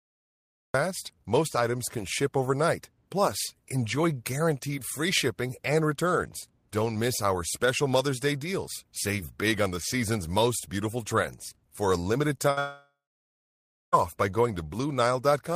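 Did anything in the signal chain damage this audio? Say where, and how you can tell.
Yes. The recording kicks in late: digital silence until 0.74 s, then the cut-off start lands mid-sound with no attack, so capture began after the talker did.

Right after "a limited", at 12.37 s, there's a short concealed packet loss: a 20 ms hole patched by the decoder, heard as a quick smear.

At 12.51 s a burst of packet loss removes about 60 ms. Concealment stretches the last sound and turns it down, then the audio jumps ahead.

From 12.59 to 13.94 s the fill fades into nearly a second of silence before "by going" returns. That's likely a long network dropout, with 1.34 s of audio lost.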